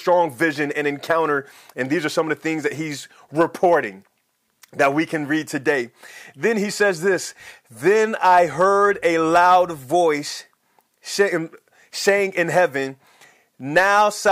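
Throughout, the speech reaches a stage driven about 7 dB past its limit, so hard clipping flattens the loudest peaks, adding brief crackle on them. From 8.30 to 9.80 s, power-line coupling, likely a ground loop, introduces mains hum: a steady, faint 50 Hz tone sitting well beneath the speech.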